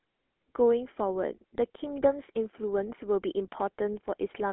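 GSM full-rate codec damage runs through the whole recording and is plainly audible. The speech has been squeezed through a vocal-tract model driven by evenly spaced pulses, so the excitation is coarse and voiced sounds take on a buzzy, gravelly roughness, consistent with a 13 kbps full-rate coder. The band sits roughly between 250 Hz and 3.4 kHz, with nothing above 3.8 kHz, leaving the audio thin and muffled.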